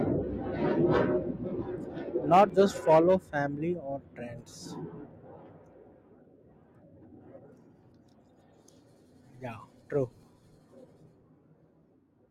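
At 2.50 s the speech skips forward. A small slice of sound, around 15 ms, is missing, and the two sides are joined with no gap. A second, smaller jump comes at 10.23 s, losing only a few milliseconds. Both are likely a dropped buffer (overrun): samples were overwritten before the program read them. Each is heard as a jolt, not silence.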